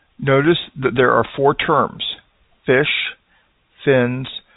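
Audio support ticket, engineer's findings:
Nothing stood out on listening to this speech clip; the telephone-band G.711 coding comes across as expected, with nothing heard above about 3.8 kHz.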